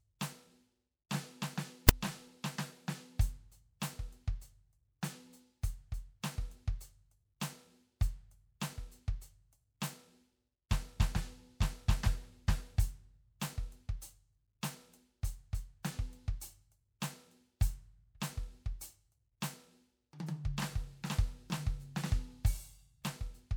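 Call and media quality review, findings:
Metadata block misparsed as sample data, file tags played as audio at 1.89 s. Text tag bytes decoded as PCM, giving a very brief, loud, hard-edged rasp offset to one side, cutting abruptly into the music. Probable component: container parser or demuxer.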